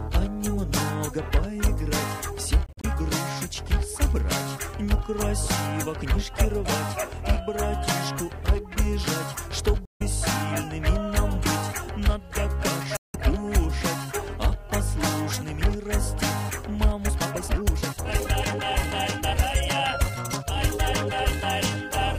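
Short silent holes cut into the sound at 2.66 to 2.85 s, 9.85 to 10.02 s, and 12.97 to 13.16 s. These are likely Bluetooth dropouts, with packets arriving too late and being discarded. The first is broken into small gaps, the longest about 43 ms. The later ones lose about 150 and 170 ms. Playback resumes as though it had continued underneath.

From 16.96 to 21.52 s comes a time-stretched section. The pace jumps to 1.91 times normal speed, likely from software squeezing the audio. Pitch stays unchanged, so it sounds rushed.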